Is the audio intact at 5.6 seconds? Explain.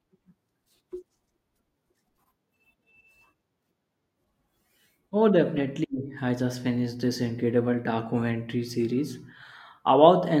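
No, a corrupt frame decoded at 5.56 to 5.59 s: flipped bits in about one compressed frame misplaced energy, giving a brief chirp, squeak, blip or burst of noise near −20 dBFS.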